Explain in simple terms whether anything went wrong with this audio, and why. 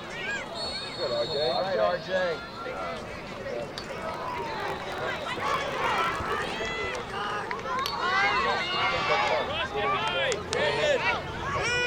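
Between 3.76 and 6.64 s there's a block size mismatch (truncated). The end of each block, likely 1024 samples long, gets dropped, causing a 50 Hz buzz and audio running 1.16 times fast.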